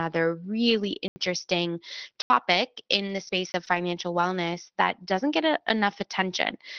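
Abrupt 80 ms holes cut the speech at 1.08 to 1.16 s and 2.22 to 2.30 s. These are blocks of digital silence, where zeroed samples replaced audio, likely because the output buffer was not filled in time.

From 2.75 s, brief rough, noisier 20 ms patches appear at 2.75, 3.07, 3.27, 3.31, 3.67, 3.75, 4.13 and 4.21 s, the last just before "that doesn't get a". Each is a lost packet rebuilt from error correction, with the decoder playing the low-bitrate Opus copy carried in the next packet.

A short smear at 2.87 to 2.91 s marks short concealed packet loss, where the receiver extended the previous sound over a missing 20 ms. It happens again at 3.65 to 3.69 s, overlapping a rebuilt frame there.

A further 20 ms block of digital silence at 3.52 to 3.54 s gives a very short hole.

All of this sits on the call path's Opus coding, whose band-limit near 6 kHz dulls the top end throughout.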